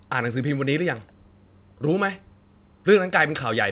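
No technical faults are audible.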